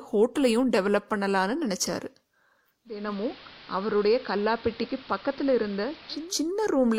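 From 2.85 to 6.38 s, digital radio blends to analogue AM via 0.3 s cross-fades: about 3 dB quieter, hiss roughly 20 dB down.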